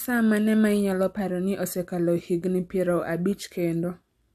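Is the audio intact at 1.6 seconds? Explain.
Yes, the audio is intact at 1.6 seconds, with no fault to be heard at that moment.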